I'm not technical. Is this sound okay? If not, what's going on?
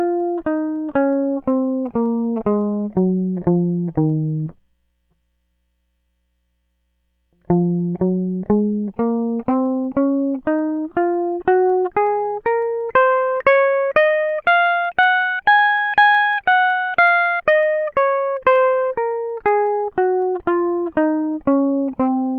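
No. From about 0.2 s to 22.26 s there are clock slip clicks, a faint steady tick roughly five times per second, about a hundred in all. The likely cause is two devices running on slightly mismatched clocks, so a single sample keeps getting dropped or repeated.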